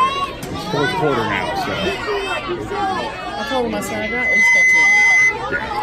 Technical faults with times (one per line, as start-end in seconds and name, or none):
3.71-5.38 loudspeaker feedback squeal